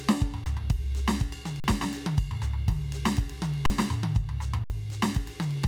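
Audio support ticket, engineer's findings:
Underrun with held sample at 0.44–0.46 s, 1.60–1.64 s, 3.66–3.70 s and 4.64–4.70 s. Music drops to a frozen flat level for 20, 40, 40 and 60 ms. Output buffer starved; converter holds last value, so onset near click-free. Live audio lost during each stall (roughly 20 to 70 ms), so resumption jumps ahead.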